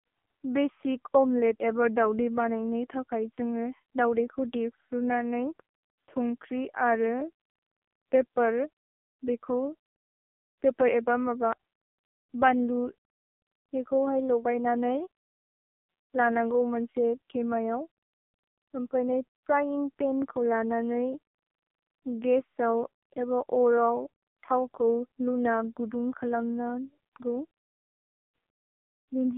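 Speech passed through the AMR narrowband mobile codec throughout, band-limited to roughly 250 Hz–3.6 kHz, with heavy buzzy, synthetic coding damage suggesting a low bitrate near 5.9 kbps.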